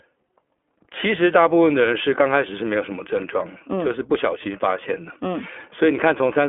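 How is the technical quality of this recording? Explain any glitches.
The quality is limited by one fault that runs throughout. The iLBC codec cuts everything above 3.6 kHz and codes each 20 ms frame independently. The speech sounds narrow, slightly rough and synthetic, which fits a rate near 15.2 kbps.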